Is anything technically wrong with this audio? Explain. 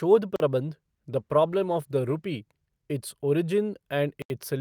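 Yes, the speech has two kinds of fault. A block of digital silence hits at 0.36 s for 40 ms and at 4.22 s for 80 ms: the sound cuts out abruptly with no fade. A call bitrate drop runs from 1.12 to 2.39 s, matching an encoder starved from about 64 to 21 kbps, so the speech turns coarse.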